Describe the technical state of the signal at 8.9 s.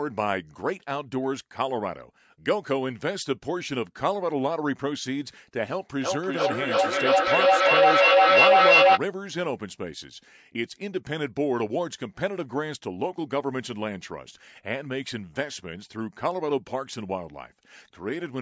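At 8.9 s the speech is buried in repeats arriving roughly every third of a second, each thinner and more ringing, and they stack up rather than fade, peaking at about 10 dB above the speech itself. This is feedback echo between two devices, running from 6.03 to 9.03 s: one device on the call plays the other's microphone signal, that microphone recaptures it, and neither echo canceller removes sound played by the other device.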